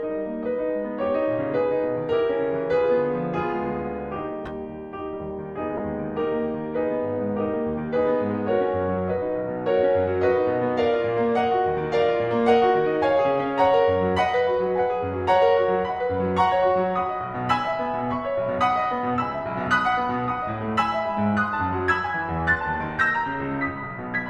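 Corrupt frame decoded at 4.43 to 4.51 s, 5.77 to 5.80 s and 23.55 to 23.61 s: in each case damaged bits in two or three compressed frames were decoded anyway, so misread codes and gains put energy at the wrong frequencies. In the music this comes through as a short chirp or noise burst lasting 26 to 74 ms. The first two peak near about -20 and -15 dBFS. The last, at about -40 dBFS, is a faint blip.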